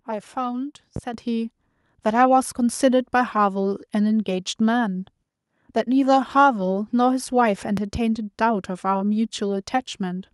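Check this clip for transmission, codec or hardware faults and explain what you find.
Three faults turn up: two loud pops and a microphone volume step.

At 0.96 to 1.00 s and again at 7.77 to 7.98 s comes a loud pop. A voltage spike, likely from a plug, switch, static or driver glitch, entered the signal. It is heard as a single sharp pop about 15 dB above the speech, then later a quick double pop about 10 dB above it, with the speech continuing underneath each.

At 1.14 s the microphone volume stepped up. The call software judged the input too quiet and raised the device's input gain in one jump. Speech and background rise together by about 7 dB at once, instead of changing gradually.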